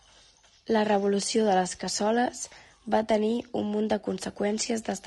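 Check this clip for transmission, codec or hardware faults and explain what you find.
One codec fault runs through the whole clip. The speech sounds rough and grainy from start to finish. Noise fills the gaps between the pitch harmonics, and the top band sounds dulled and somewhat synthetic. This is likely low-delay AAC compression, the AAC-ELD mode used in video calls. Its short frames cannot separate closely spaced harmonics well. Each frame also costs extra bits. The plainly audible damage fits a bitrate of about 32 kbps.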